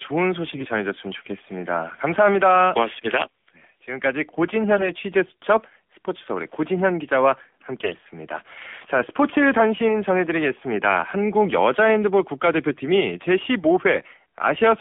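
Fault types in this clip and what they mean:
AMR narrowband mobile codec: The speech was coded as AMR-NB at 7.4 kbps, keeping only about 250 Hz to 3.5 kHz, so it sounds muffled, buzzy and plainly synthetic.
AMR bit errors: Corrupted codec bits put the excitation pulses and fine parameters in wrong places, turning the voice briefly hoarse and gargly near 0.5, 4.8 and 7.8 s.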